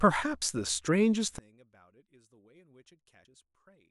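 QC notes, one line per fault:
0.42 s, 1.28 s and 3.25 s: dropped buffer (overrun). Each is a small jump forward in the speech. No gap of silence is heard. The audio on either side is spliced straight together. The first two lose about 20 ms each. The one at 3.25 s loses about 70 ms. The likely cause is the program failing to read its input before the hardware overwrote it.
1.38 s to the end: one channel inverted. From here the mono sum drops by about 31 dB. The centred speech almost disappears, leaving a faint residue. Both channels carry nearly the same signal. Flipping one channel's polarity makes them cancel when summed. Only their small differences remain. A likely cause is a reversed wire or a sign error in one channel's processing.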